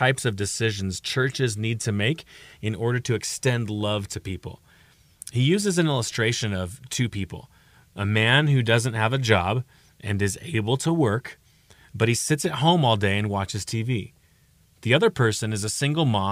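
Listening to this speech recording, nothing stood out as a technical problem at any point.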